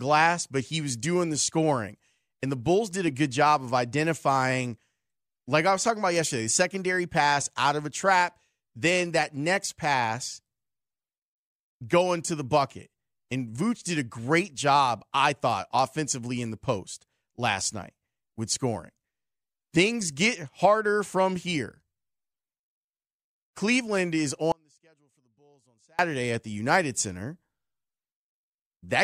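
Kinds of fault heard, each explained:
Audio dropout to a faint residue: at 24.52 s the speech cuts out abruptly for about 1.47 s, leaving only a faint trace far below normal level, roughly 35 dB down, before it returns at "at the". This is likely a signal loss upstream while the path after the break stayed live.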